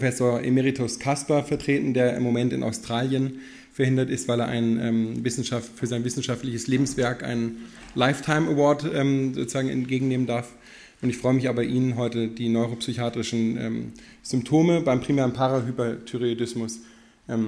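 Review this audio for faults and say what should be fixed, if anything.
Nothing stood out on listening, so there is nothing here that needs fixing.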